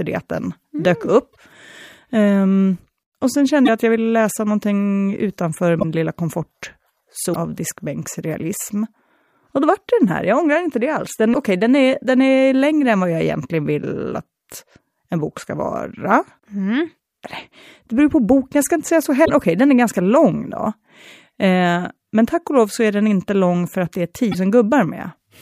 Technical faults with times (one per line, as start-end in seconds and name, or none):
1.32-1.36 broken MP3 bit reservoir
3.65-3.69 broken MP3 bit reservoir
5.79-5.84 broken MP3 bit reservoir
7.33-7.36 broken MP3 bit reservoir
11.33-11.35 broken MP3 bit reservoir
19.24-19.30 broken MP3 bit reservoir
24.31-24.35 broken MP3 bit reservoir